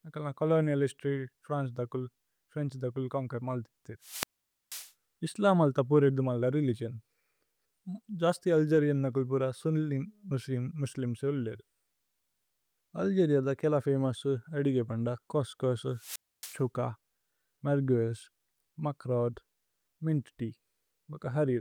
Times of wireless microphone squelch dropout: 4.01-4.92, 15.92-16.63

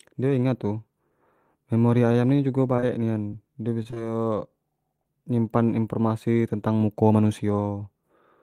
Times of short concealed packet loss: 5.02-5.06

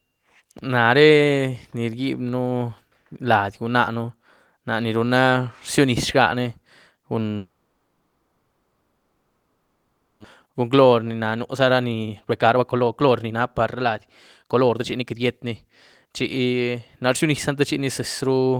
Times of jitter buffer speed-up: 10.45-13.93, 14.43-15.65, 16.05-18.32

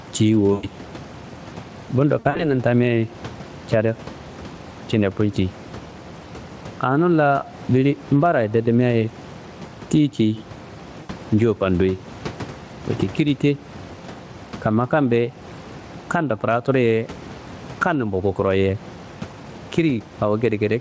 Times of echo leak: none

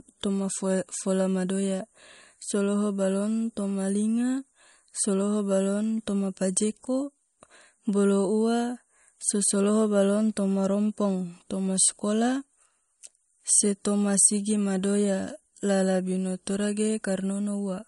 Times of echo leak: none

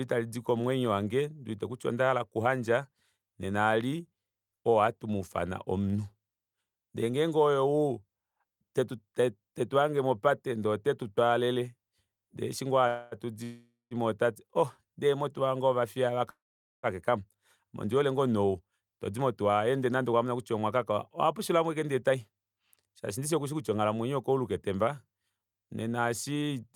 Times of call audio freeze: 12.87-13.15, 13.44-13.94, 16.30-16.86

